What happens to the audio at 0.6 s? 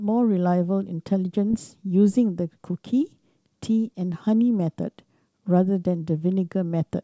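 Nothing goes wrong at 0.6 s: the speech carries on intact through the G.722 wideband telephone coding at 64 kbit/s, with no dropout, click or distortion at that moment.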